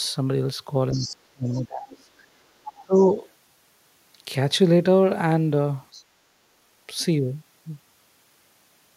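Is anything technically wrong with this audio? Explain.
Yes. The speech has several echo-canceller problems in its first seven seconds.

A second voice leaks through at 0.92 to 1.15 s, 1.52 to 1.61 s, 2.67 to 2.81 s and 5.93 to 6.03 s. This is the other side's voice leaking through. It sits about 15 dB below the talker at first, then about 20 to 30 dB below. It comes in short scraps. The likely cause is loudspeaker playback that the echo canceller did not fully remove from the microphone.

From 0.93 to 2.09 s, the talker's own voice sinks. The drop is deep, roughly 30 dB at worst, and it affects about a second. It happens again from 2.81 to 3.13 s, dropping roughly 20 dB. This is speech suppressed in double talk. Both sides were likely talking at once. The canceller could not tell its own talker from the echo, so it pulled everything down.

From 2.37 to 2.53 s, the room sound dips by about 14 dB for around 150 ms and then returns. 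This is background gated by the echo canceller. While the loudspeaker played, the canceller clamped the microphone hard. It let go a moment later, and the ambience came back.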